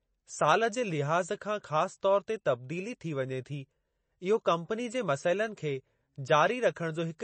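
Throughout, the speech sounds watery and swirly, likely from heavy MP3 compression; a spectrogram shows a hard 8.3 kHz ceiling and flickering holes beneath it.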